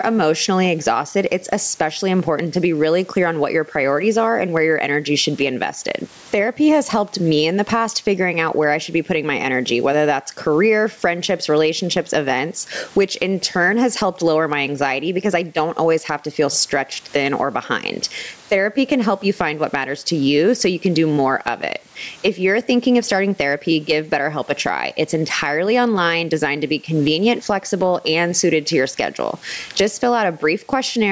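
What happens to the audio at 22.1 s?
Gain pumping is present at 22.1 s, as it is throughout the clip. The likely cause is microphone gain set far too high, with a fast limiter pulling the level down by roughly 15 dB on loud speech. Loud and soft parts end up closer in level, squashing the sound.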